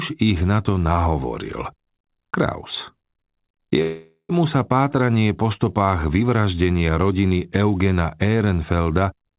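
At 3.82 s the speech stalls in a call audio freeze until 4.31 s: the last sound smears into a fading buzz for about half a second, dropping to silence near the end. A jitter buffer ran dry is the likely cause. Then talk resumes where it stopped, nothing lost, just running late. The whole thing is capped around 4 kHz, which fits narrowband G.711.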